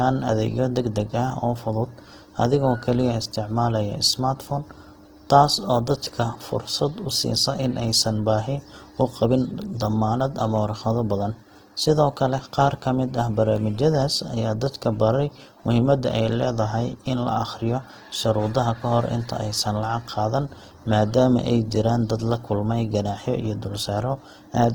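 Throughout the speech, the sound is rough and grainy, with a noisy, fizzy texture. The likely cause is Opus compression in its music mode at a low rate, perhaps around 16 kbps. Starved bands are refilled with noise. Bandwidth still reaches about 20.2 kHz.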